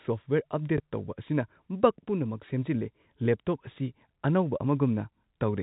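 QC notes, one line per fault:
0.78 s, packet loss with last packet repeated: a 20 ms gap, consistent with one lost 20 ms packet, is filled by replaying the previous one, giving a small blip.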